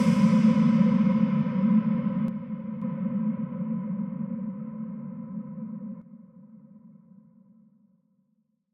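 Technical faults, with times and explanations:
2.28 to 2.82 s and 6.02 s onward: sudden gain jump. Sound and background drop together, first by about 6 dB and then by about 9 dB, with no fade at any edge. This is likely a digital gain change applied instantly between samples, without a ramp.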